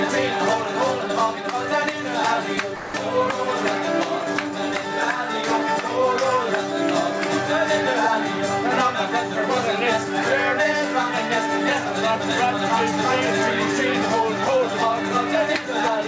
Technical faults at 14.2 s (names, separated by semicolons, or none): none